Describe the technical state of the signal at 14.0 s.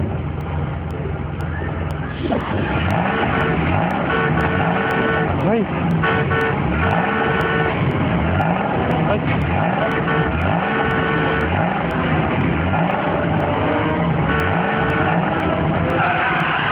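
At 14.0 s the periodic USB or driver dropouts are still running. From 0.41 to 16.40 s, something stalls the driver every 0.5 s and about half a millisecond is replaced by silence, so you hear regular ticks.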